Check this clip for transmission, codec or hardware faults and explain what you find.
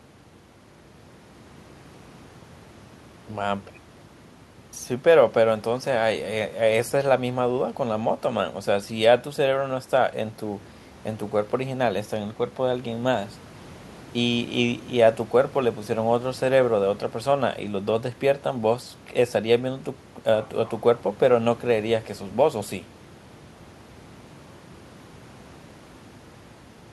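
No faults of any kind can be heard here.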